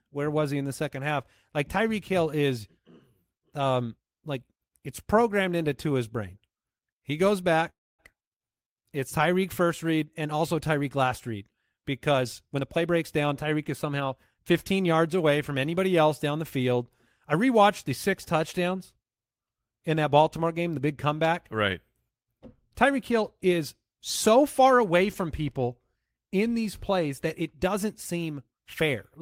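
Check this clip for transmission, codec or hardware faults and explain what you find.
Two faults stand out in this speech clip, one a stall and the other a stretch of hurried playback.

From 7.69 to 8.01 s there is a call audio freeze. The sound briefly smears on as a fading buzz, then drops to silence for about 260 ms. The likely cause is packets held up in transit, so the jitter buffer ran dry and the receiver filled the wait. Unlike packet loss, nothing is cut out: the speech resumes exactly where it stopped, now running about 293 ms later than before.

From 12.14 to 14.35 s there is a jitter buffer speed-up. The speech plays at roughly 113% of normal rate yet keeps its natural pitch, so it sounds rushed rather than chipmunk-like. The receiver was catching up on excess buffered delay by snipping out tiny pitch-period-length pieces again and again, removing about 0.3 s in total. The unchanged pitch and the gradual, spread-out nature separate it from a resampling error or a single audible cut.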